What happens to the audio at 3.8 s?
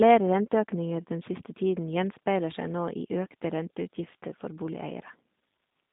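At 3.8 s the G.729 codec damage present throughout the clip is plainly audible. The speech is rebuilt from a vocal tract filter, a pitch predictor and sparse pulses, which fits an 8 kbit/s coder. It sounds rough and synthetic, band-limited to about 150 Hz–3.7 kHz, with nothing above 3.8 kHz.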